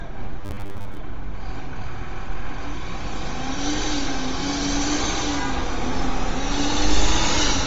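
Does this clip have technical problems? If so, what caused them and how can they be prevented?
Yes. Throughout, the sound has a grainy, breathy edge, which is plainly audible Bluetooth LC3 compression, likely at a low rate such as 32 kbps with 10 ms frames. Raising the link's bitrate or avoiding the Bluetooth hop would prevent this.

From 0.41 to 0.98 s the sound turns into a rigid, metallic buzz at 100 Hz. This is robotic sound from repeated short buffers. Audio likely arrived too slowly, so roughly half of that stretch is a repeated 10 ms block that imposes the fixed pitch. Larger buffers or steadier delivery would prevent it.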